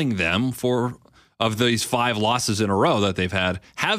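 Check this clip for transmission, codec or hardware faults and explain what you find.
One fault affects the opening of the clip. From 0.0 to 1.5 s, just before "these five losses in", the resampler restarted on every block: each 250 ms block was converted from 48 kHz to 44.1 kHz with no knowledge of its neighbours, leaving a small error at every edge, heard as regular ticks at 4 Hz under the speech.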